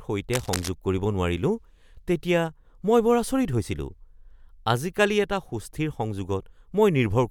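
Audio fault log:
0.33–0.69 s, cable scratch noise: a dense, irregular burst of scratchy rustling sits over the speech for about a third of a second, roughly 10 dB below it. The likely cause is a worn cable or connector being moved, its contact resistance jumping rapidly and modulating the signal. Unlike steady hiss or evenly spaced clicks, the noise is clumped and uneven and confined to one handling moment.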